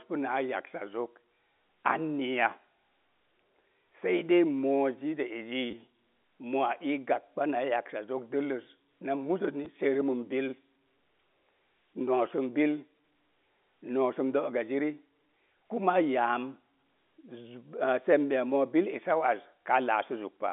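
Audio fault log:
5.71 to 5.73 s and 9.65 s, packet loss with last packet repeated: Audio drops out and a short piece of sound is replayed to fill each gap. It lasts 20 ms at 5.71 s and 10 ms at 9.65 s, which fits 10 ms packets. The replayed piece seldom lines up with the pitch cycle. The first, longer fill gives a brief robotic stutter with a buzz near 100 Hz. Both sit inside the narrow telephone band.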